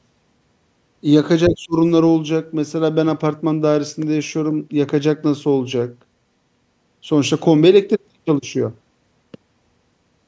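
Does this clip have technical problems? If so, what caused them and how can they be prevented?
Yes. From 1.48 to 1.76 s the speech dips sharply, falling by around 25 dB. This is likely speech suppressed in double talk: the echo canceller mistook the talker for loudspeaker echo while both sides spoke. Better echo cancellation, or a headset, prevents it.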